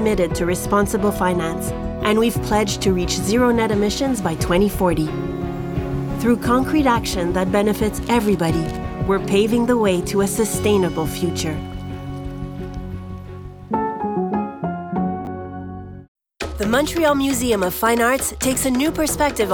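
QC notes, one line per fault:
15.25 to 15.27 s, chunks out of order: a 10 ms slice of audio turns up one chunk late and plays after the slice that should have followed it, so two 10 ms pieces are swapped. Nothing goes missing, but the swap leaves three hard joins inside about 20 ms where the waveform doesn't line up, and you get a quick scrambled blip right at that spot.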